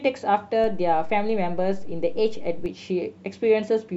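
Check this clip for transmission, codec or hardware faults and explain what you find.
There is one hardware-type fault in this speech clip: a DC step. At 0.64 s the waveform's zero line jumps by about -27 dBFS and holds there until 2.66 s. Each jump sounds like a short low thump, the kind a converter recalibrating or an offset input being switched in would leave. The speech carries on at the same level throughout. Unlike a dropout or a digital click, nothing is lost or glitched. Only the baseline shifts, so the stretch otherwise sounds continuous.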